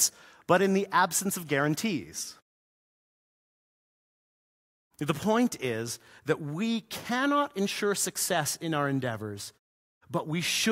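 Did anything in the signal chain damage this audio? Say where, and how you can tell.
No, no stage damaged it.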